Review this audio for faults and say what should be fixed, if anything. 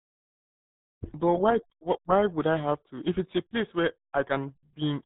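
Throughout the clip, the speech has passed through the RealAudio 14.4 codec, a dial-up era coder whose heavy damage fits a bitrate of 8 kbit/s. It keeps nothing above 3.8 kHz and coarsely models what remains, so the speech sounds muffled and gargly. To prevent this, work from the original recording and encode with a modern codec at an adequate bitrate.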